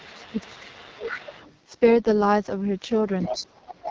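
AMR wideband (HD Voice) codec damage runs through the whole recording. The speech has the rough, raspy grain of this codec's lowest modes, which fits about 6.6 kbit/s. At that rate the pulse-driven vocal tract model has too few bits to track the voice, so detail smears, and the top band from 6.4 to 7 kHz is only shaped noise standing in for real content.

From 0.00 to 1.31 s the talker's level sinks and recovers over about a second, at its deepest roughly 20 dB down. This is likely speech suppressed in double talk: while the far side was also talking, the echo canceller could not separate the near voice from loudspeaker echo, so it turned both down.

Overlapping this, from 0.07 to 1.58 s, a faint second voice sits about 20 dB under the talker. It is likely the other side's voice leaking through, where the echo canceller left some of the far side's loudspeaker playback in the microphone signal.

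From 3.2 to 3.82 s that leaked voice comes back much stronger, only about 5 dB below the talker. Inside it, the talker drops slightly, by about 5 dB, at 3.3 s. From 3.66 s to the end it falls roughly 20 dB again, the same double-talk suppression as at the start.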